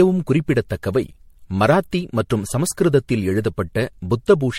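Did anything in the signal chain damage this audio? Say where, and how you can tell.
Yes, at the codec stage: generation loss throughout, swirly and hollow with blurred attacks, nothing above 16.4 kHz, likely from around seven passes through MP3, fitting 64 kbit/s.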